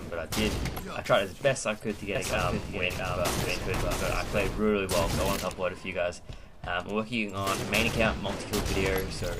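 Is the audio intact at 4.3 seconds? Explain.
No. At 4.3 seconds the clip is inside a doubled audio track running from 2.15 to 4.59 s. A second full-band copy of the sound trails the original by roughly 0.7 s at about 5 dB lower, likely from a second, slower capture path. It sounds like a dry, distinct repeat without room tail. On a spectrogram the same patterns reappear shifted about 0.7 s later, slightly fainter, and the copy starts and stops abruptly.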